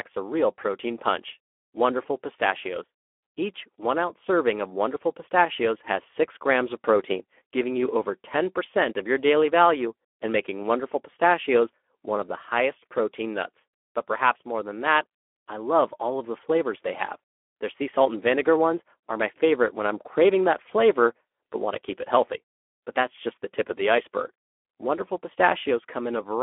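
Throughout, the speech sounds hoarse and grainy, confined to 300 Hz to 3.4 kHz: Speex codec damage, consistent with a bitrate near 11 kbps.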